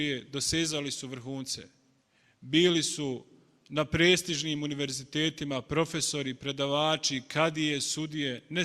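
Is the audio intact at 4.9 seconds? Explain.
Yes, the audio at 4.9 seconds is intact, with no dropout, click, distortion or other fault to be heard at that point.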